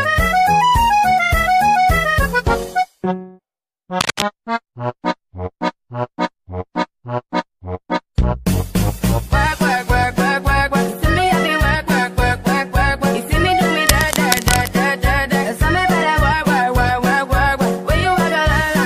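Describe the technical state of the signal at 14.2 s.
At 14.2 s there is cable scratch noise, from 13.87 to 14.70 s. Dense, uneven scratching bursts sit nearly as loud as the signal. A worn cable or connector was likely moved.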